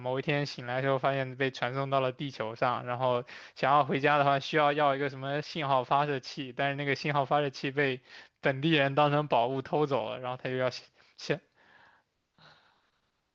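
No technical fault can be heard anywhere in the speech recording, with the signal holding steady and continuous throughout.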